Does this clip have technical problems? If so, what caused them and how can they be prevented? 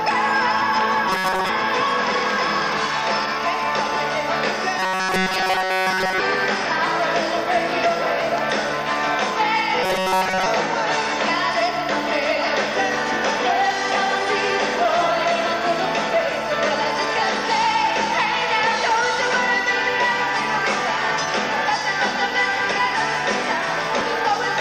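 Yes. Robotic sound from repeated short buffers appears at 1.09 to 1.49 s, 4.80 to 6.20 s and 9.84 to 10.46 s: a rigid metallic buzz at 188 Hz, likely from a stalled feed looping a fragment of about 5.3 ms. It covers most of the first and third stretches and all of the second. Keeping the audio thread fed on time, or using a larger playback buffer, prevents it.

Dropped buffers (overrun) occur at 22.71 s and 24.01 s. Each is a point where the sound jumps ahead without any gap, about a tenth of a second missing at the first and roughly half that at the second, likely because samples were overwritten before the software read them. Giving capture a higher priority and a larger input buffer prevents these losses.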